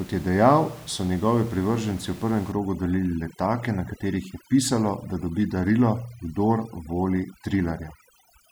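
From about 2.52 s, just after "v prvem", overdone noise removal sets in to the end: aggressive per-band gating drops the room noise, breaking it up into twinkling specks.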